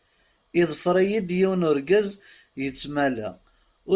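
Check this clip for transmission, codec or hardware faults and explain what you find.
No faults turn up anywhere in this clip.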